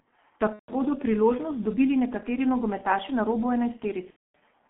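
A speech recording coded throughout with the G.723.1 codec: band-limited to roughly 200 Hz–3.4 kHz, heavily muffled and hoarse with smeared consonants, consistent with a 6.3 kbit/s mode. VoIP packet loss concealed by the speech codec appears at 0.53–0.75 s, just before "bodo priložnost dobili nekateri", and at 4.10–4.35 s, after "nekateri nogometaši na robu". The decoder briefly stretches the last sound and then mutes, covering roughly 150 ms and 240 ms of missing audio.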